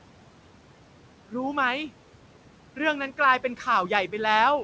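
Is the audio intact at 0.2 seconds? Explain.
No. Noise suppressor artifacts run throughout, 0.2 s included: frame by frame, bands judged to be steady noise are cut by about 12 dB, so the room noise dips and swells.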